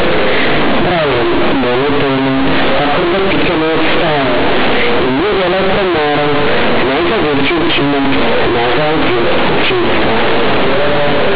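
Speech runs through the whole clip under heavy distortion from companded audio read as linear: mu-law bytes are being played as plain 8-bit samples with no expansion step. Because the logarithmic codes are taken at face value, every sign change jumps across roughly half the output range, so quiet sounds come out as loud as peaks. It sounds harsh, buzzy and very loud, with strong noise filling the pauses. The waveform looks like a dense block with little level contrast, and the spectrogram shows broadband energy smeared across the telephone band even between phrases, although the 4 kHz ceiling of the 8 kHz telephone format still holds.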